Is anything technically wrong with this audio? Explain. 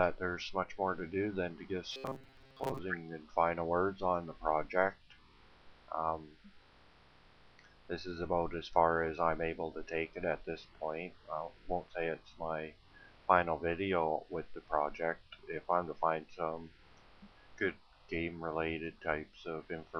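Yes. From 1.91 to 2.78 s the sound turns into a rigid, metallic buzz pitched at 133 Hz, roughly tracking the underlying sound but with its natural movement flattened out. This is robotic sound from repeated short buffers, most likely caused by new audio arriving too slowly, so the playback loops the last 7.5 ms or so to fill the gap. With around 70% of this stretch made of repeats, that period imposes a buzz at 133 Hz.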